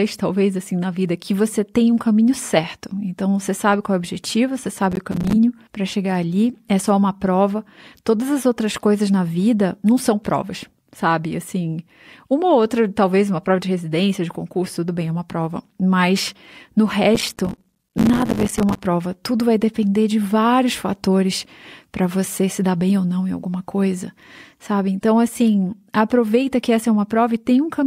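Between 4.92 and 5.33 s, and again for a longer stretch from 17.15 to 18.80 s, the speech is broken up by processor overload crackle. The system repeatedly failed to deliver audio buffers on time, and each missed buffer was replaced by a silent gap with hard edges. The gaps are very short and closely spaced, which fits buffers of around 5 ms, so they merge into a gritty, tearing crackle over the voice.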